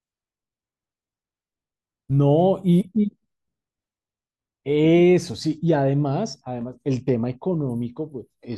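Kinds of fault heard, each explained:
Nothing stood out on listening to this speech recording.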